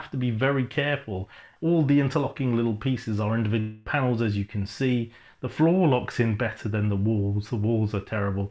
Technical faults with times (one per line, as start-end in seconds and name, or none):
3.60-3.88 long network dropout